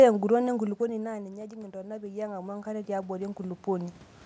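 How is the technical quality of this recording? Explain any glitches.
The recording has one audible fault, automatic gain rising. From 0.78 s to 4.04 s the level swells steadily. The talker moved away just before, dropping the input by about 17 dB, and the automatic gain control compensated by raising its gain about 15 dB, so voice and room noise grow louder together.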